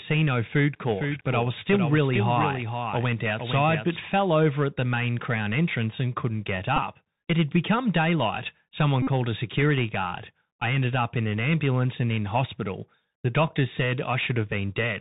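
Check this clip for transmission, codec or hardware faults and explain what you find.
Three faults are present: a Bluetooth CVSD headset codec throughout, a doubled audio track early on, and two Bluetooth headset packet repeats.

The Bluetooth CVSD headset codec affects the whole 15-second speech clip, and its damage is plainly audible. CVSD sends one bit per sample at 64 kHz, saying only whether the waveform steps up or down, with an adaptive step size. Nothing above 4 kHz survives, so a spectrogram shows an empty region above that line. Loud high-frequency sounds outrun the step and distort, s sounds turn scratchy, and a granular hiss sits under the speech.

A doubled audio track runs from 0.90 to 3.96 s, ending just before "fell over at the". A full-band copy of the same speech trails about half a second behind, roughly 5 dB quieter. It is likely a second, slower capture path mixed in with the first. 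Because the copy has no decay or room colour, it sounds like a flat overlapping voice rather than an echo. On a spectrogram, each syllable pattern repeats half a second later, slightly fainter, and the copy starts and stops abruptly.

Two Bluetooth headset packet repeats occur. The first is at 6.77 s, just after "entrance and couldn't get", where 15 ms was lost, which fits about four packets. The second runs from 9.02 to 9.07 s, just before "a security guard I", covering 48.8 ms. When voice packets are lost, the chip decodes the last good packet's bits again, and the copies repeat every 3.75 ms. The short one is a very brief buzz near 267 Hz. The longer one is a brief buzz near 267 Hz, which shows on a waveform as a rigidly periodic stretch and on a spectrogram as evenly spaced harmonic lines.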